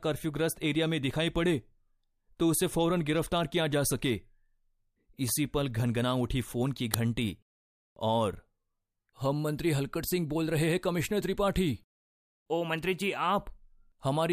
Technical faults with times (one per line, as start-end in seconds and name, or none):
6.94 uninitialised buffer